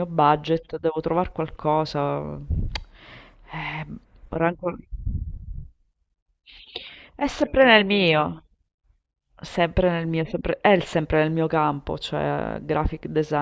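No technical faults are audible.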